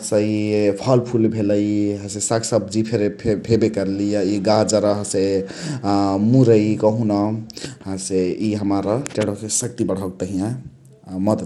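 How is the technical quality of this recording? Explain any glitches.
Technical quality is compromised throughout by one fault, likely Bluetooth SBC compression at a small bit pool, fitting about 96 kbps. Starved, coarsely quantised upper sub-bands leave nothing above 17 kHz, so the speech's treble flickers under a plainly audible gritty, aliased grain.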